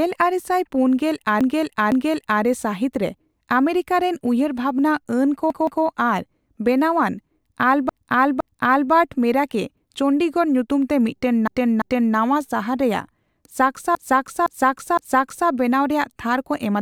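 Repeated frames stutter the speech five times. At 1.41 s, a 0.51 s stretch plays twice more. Then a 0.17 s stretch at 5.50 s, 0.51 s at 7.89 s, 0.34 s at 11.48 s, and 0.51 s thrice more at 13.95 s. Resent compressed frames replay audio, lengthening the clip.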